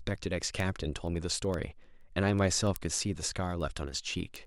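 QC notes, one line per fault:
0.13–4.45 s, word clock ticks: steady ticking about ten times a second, as an unlocked receiving clock, roughly 200 ppm off, drops or repeats one sample per slip.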